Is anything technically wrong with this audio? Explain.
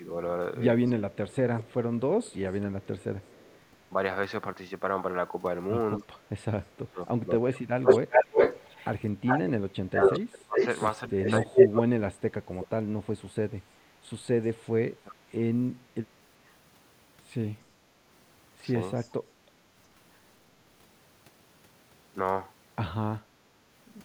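Yes. The clip is speech, and it has two kinds of fault, both typical of a hands-free call.

Echo leak occurs at 0.86 to 3.6 s, 7.84 to 11.82 s and 18.96 to 19.12 s. A delayed copy of the speech trails the original by 234 ms in the first stretch and 394 ms in the later two. It sits about 15 dB below the speech at first, rises to roughly 10 dB above it in the middle stretch, and sits about 30 dB below it in the last. The likely cause is a far-end echo canceller letting loudspeaker sound back into its microphone. Unlike reverberation, it is a distinct repeat at a fixed lag, not a smooth decay.

Speech suppressed in double talk occurs at 0.99 to 3.95 s, 5.97 to 13.15 s and 14.9 to 16.52 s. Within these spans the speech dips or drops out in pieces, by roughly 25 to 30 dB at its deepest. The affected parts add up to about one and a half seconds, about four seconds, and under half a second. This is likely an echo canceller attenuating everything while both sides talk. 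It differs from the echo leak because sound is taken away rather than added, and from packet loss because the gaps follow the overlapping talk.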